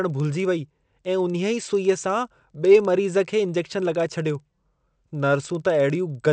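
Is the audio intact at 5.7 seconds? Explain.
No. At 5.7 seconds, as across the whole speech clip, the resampler restarted on every block. Each 50 ms block was converted in isolation, so every edge carries a small error, heard as ticks at 20 Hz. On a spectrogram these appear as faint vertical lines every 50 ms, and on the waveform as tiny steps at each boundary.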